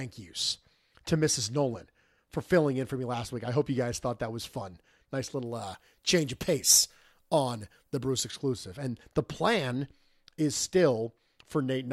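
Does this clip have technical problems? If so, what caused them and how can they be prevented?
Yes. Pre-emphasis left on, from 5.46 to 8.31 s: the treble was boosted for transmission and the matching de-emphasis never applied, so high frequencies sit about 10 dB too strong at 10 kHz relative to 1 kHz, which fits a 50 µs FM curve. The speech turns thin, bright and sibilant. To prevent it, make sure the receiving chain applies the matching de-emphasis curve whenever pre-emphasis is used.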